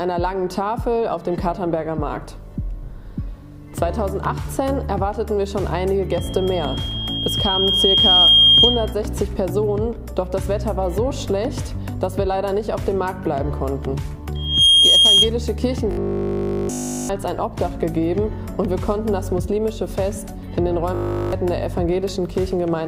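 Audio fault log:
6.11–8.94 s and 14.35–15.31 s, loudspeaker feedback squeal: the microphone picks up its own loudspeaker until loop gain passes unity at 3.2 kHz. A pure tone swells to roughly 10 dB above the programme, over about two seconds the first time and a fraction of a second the second time.
15.91–17.11 s and 20.95–21.33 s, robotic sound from repeated short buffers: delivery of new audio likely stalled, so a 20 ms chunk was looped continuously in place of fresh material. The fixed repeat stamps a rigid, metallic 50 Hz buzz onto the sound.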